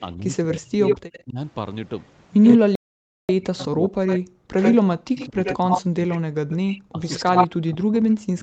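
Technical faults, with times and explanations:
0.0 to 1.38 s, 2.58 to 6.36 s and 6.92 to 8.42 s, speech suppressed in double talk: the voice repeatedly dips by up to about 40 dB, loses its upper range or breaks into fragments, adding up to roughly a second in the first span and about two seconds in the second. The likely cause is an echo canceller that could not tell this talker from the far side playing at the same moment, so it pulled down everything. On a waveform the envelope collapses in ragged notches; on a spectrogram the upper bands thin out or whole columns go dark.
0.51 to 1.22 s and 2.42 to 8.42 s, echo leak: a second copy of the voice trails the first by 85 ms, at roughly equal loudness in the early stretch and about 5 dB below it from 2.42 s to the end. This is likely residual loudspeaker sound that the far end's microphone picked up and its canceller failed to remove, so it was sent back. 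A spectrogram shows each harmonic pattern repeated as a ghost shifted 85 ms to the right, and a waveform shows smeared, doubled onsets.
2.75 to 3.29 s, playback stall: the sound stops mid-flow for about 0.54 s and then resumes. The likely cause is a player that ran dry of data or had its thread blocked, leaving the output silent until it caught up. On the waveform this is a flat line with abrupt edges on both sides, and on the spectrogram a clean vertical gap with no energy in any band, unlike the dips and thinning of the suppression around it.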